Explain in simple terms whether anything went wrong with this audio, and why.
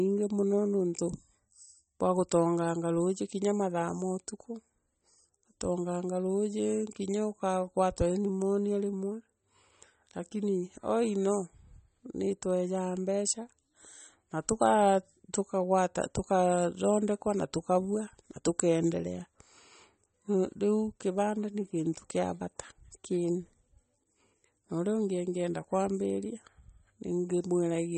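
Something did go wrong. The speech sounds watery and swirly from start to finish, and nothing is heard above about 8.4 kHz. S sounds turn metallic. The likely cause is MP3 compression at too low a setting, which drops treble and faint detail.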